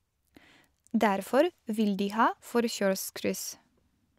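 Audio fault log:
No fault is heard anywhere in the speech recording. Nothing in it calls for a timed entry in this log.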